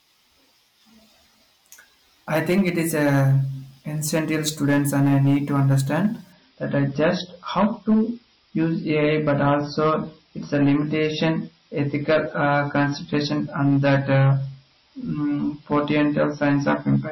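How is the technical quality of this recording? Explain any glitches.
The quality is poor, with two faults in the speech.

Hard clipping, throughout: the signal is overdriven by about 9 dB, so roughly 4 percent of samples are squared off, adding harsh crackle on louder syllables.

Adaptive stream at a lower bitrate, from 6.32 s to the end: the quality switches suddenly without a gap, losing everything above 5.8 kHz and turning dull and swirly, which fits a drop from 128 to 24 kbit/s MP3.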